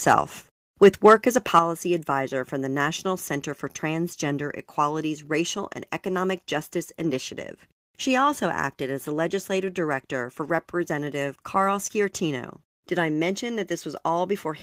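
Microphone overload appears first from 0.83 to 1.14 s, just before "as a", and again briefly from 1.55 to 1.59 s, between "as a" and "advisor for the". The loudest peaks have flattened tops and a harsh, crackly edge. The likely cause is an input level set too high, so the signal overshot the converter's ceiling by about 2 dB and a small share of samples were squared off at the limit.

Microphone volume stepped down at 1.59 s, right after the second distorted peak and just before "advisor for the". The level of the sound and its background drops abruptly by about 7 dB in a single step rather than a smooth fade. The likely cause is the call software detecting the overload and lowering the device's input gain in one move, so everything after that point sits noticeably quieter.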